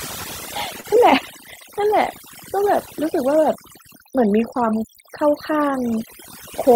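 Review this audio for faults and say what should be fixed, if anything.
Overdone noise removal runs through the whole clip. The reducer was set too aggressively, so frequency bands near its noise estimate are pulled down or switched off along with quieter parts of the speech. The background drops and breaks up into twinkling specks. To prevent it, lower the reduction depth or use a gentler noise-suppression setting so quiet speech components survive.

Clock drift between sender and receiver is also present throughout. The sender's clock runs roughly 2% slow compared with the receiver's, so the jitter buffer keeps draining and the receiver has to pad the stream to keep playing. The result is small timing hiccups at uneven intervals. To prevent it, lock both ends to a common clock or use adaptive resampling that tracks the rate difference smoothly.

A short stall from a late packet occurs at 0.80 to 0.86 s. 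A packet missed its playout time, the buffer ran empty, and the receiver held the last sound for 35 ms until the packet arrived. Playback then resumed from the same point with nothing lost, and the added 35 ms of delay leaves a brief held moment. To prevent it, keep enough jitter-buffer depth to absorb late arrivals of this size.

Repeated timing corrections run from 1.80 s to 6.71 s. To keep pace with the slow sender, the receiver repeatedly inserts short repeated pieces, so playback runs at about 98% speed. In total this adds something like a tenth of a second over the stretch. The edits all go in the same direction but are unevenly spaced. To prevent it, correct the underlying clock mismatch, or spread the adjustment through smooth time-scaling rather than discrete repeats.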